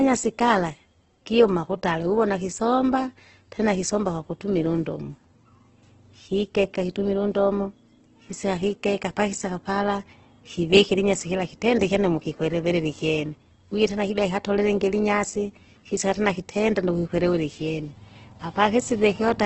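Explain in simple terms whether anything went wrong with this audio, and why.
Heavy data compression runs through the whole clip, likely Opus compression squeezed hard. The speech sounds rough and grainy rather than smooth, and everything above about 8.2 kHz is cut off, so the sound lacks crispness and air from start to finish.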